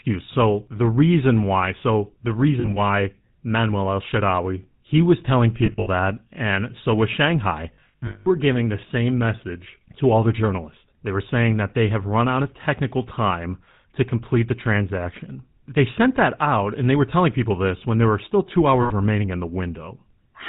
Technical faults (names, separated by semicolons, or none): GSM full-rate codec; lost GSM frames